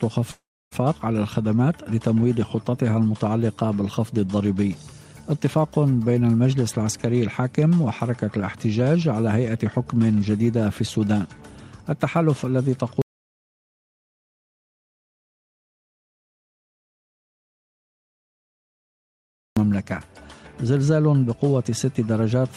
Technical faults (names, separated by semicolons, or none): long network dropout; audio dropout to silence